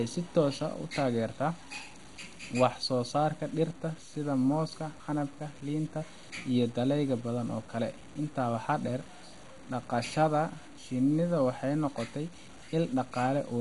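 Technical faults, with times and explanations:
throughout: low bit depth without dither. The quiet parts of the speech turn gritty and grainy, and the softest tails sputter between a couple of levels before dropping to silence. The likely cause is truncation to very few bits with no dither, which fits roughly 7-bit resolution. The rounding error tracks the speech, sitting only about 25 dB below it. A waveform zoom shows visible staircase steps, and the spectrogram shows signal-shaped hash rather than a steady noise floor.
throughout: MP2 compression. The speech sounds dull and carries a gurgling, granular distortion like low-rate digital radio. This is likely heavy Layer II coding at a bitrate around 56 kbps. The coder starves its sub-bands of bits, switching the upper ones off and coarsely quantising the rest. On a spectrogram nothing appears above 11.2 kHz, and the higher bands below that cutoff show blocky patches that flicker on and off from frame to frame.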